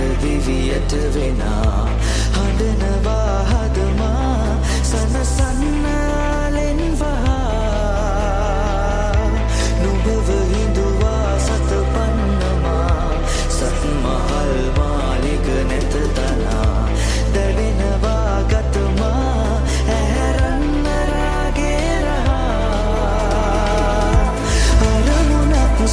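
No technical faults occur at any point in the audio, so there is nothing to describe in time order.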